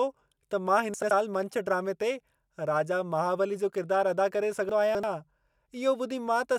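Chunks out of order twice in this speech clip: a block of audio reached the output late and played after blocks that should have followed it. At 0.94 to 1.11 s one chunk is displaced by a single position, and at 4.69 to 5.04 s a chunk arrives three positions late. The blocks are about 85 ms each. Nothing is lost, but each spot sounds jumbled.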